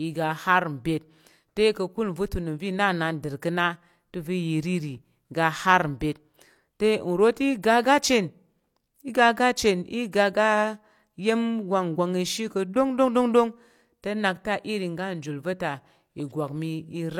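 At 10.12 s a sharp onset in the speech carries pre-echo: the transform codec spread quantisation noise across its block, so hiss sized for the loud attack leaks about 15 ms ahead of it. It sounds like a brief smeared hiss, and a spectrogram shows a broadband smear just before the transient.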